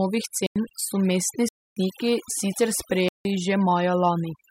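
From the start, overdone noise removal runs through the whole speech recording. The reducer was pushed so hard that narrow frequency bands near its noise estimate are pulled almost to nothing, taking the softer parts of the voice with them. The background sinks to near silence dotted with twinkling, metallic specks. Those isolated specks and the smeared texture set it apart from ordinary low-pass dullness or a simple gate, which cut more evenly.

Three blocks of digital silence break the audio. The first runs from 0.46 to 0.56 s, about 93 ms, just before "so mestni". Its length fits a 4096-sample buffer at 44.1 kHz, so the output was likely not filled in time. The second, from 1.49 to 1.77 s, about 279 ms, comes right after "so mestni". The third spans 3.09 to 3.25 s, about 166 ms. Each cuts out and back with no fade. That hard cut is what separates these holes from a dropout that fades or is filled in with concealment noise.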